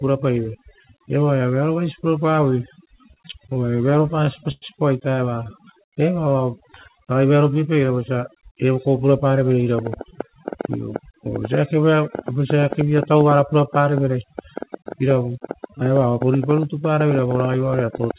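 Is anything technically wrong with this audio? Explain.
Yes, four faults are audible in this speech clip.

Overdone noise removal runs throughout. The noise suppressor was set too aggressively and is pulling individual frequency bands down whenever they approach its noise estimate. The background drops and breaks up into twinkling specks, and quieter components of the voice are removed along with it.

Repeated stalls (stutter) occur from 2.75 to 4.65 s, just after "vearovaisi purapavoi". Packets arrived late and the jitter buffer ran dry over and over. The receiver stretched the last sound to cover each gap, the longest about 102 ms, so the passage drags and stutters.

Jitter buffer speed-up occurs from 7.75 to 8.43 s, just before "eva kov". With too much audio queued, the receiver cut out short pitch-period pieces in succession, around 50 ms in total. The result plays at about 106% speed with unchanged pitch and sounds hurried.

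A train of clicks runs from 9.79 to 18.12 s: some seventy similar pulses at an irregular pace of about 7.2 per second, peaking about 15 dB above the signal. They tick over the speech and through the pauses. The likely cause is electrical interference or a faulty connection or power supply.

The call path itself cuts everything above 4 kHz, which fits narrowband G.711 coding.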